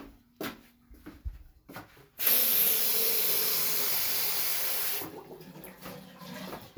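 No technical faults are audible anywhere in the recording.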